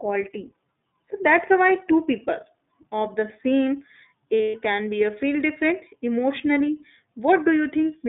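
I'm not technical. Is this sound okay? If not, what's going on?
No. The iLBC codec shapes the whole recording. This phone-line speech codec squeezes the audio into a narrow band, roughly 200 Hz to 3.7 kHz, so everything above is simply gone. That is why the voice sounds thin and muffled, with a rough, slightly synthetic edge that is plainly audible throughout. It works in short independent chunks, and the sound fits 20 ms frames.

There are lost iLBC frames from 4.39 to 4.56 s, between "of the same" and "can be a feel". About 140 ms of audio went missing, scattered over 160 ms, with the longest single gap about a tenth of a second. That fits roughly seven lost frames. To cover each hole, the decoder repeats the last bit of voice mixed with noise, so you hear a brief held, buzzy vowel. The voice returns cleanly right after.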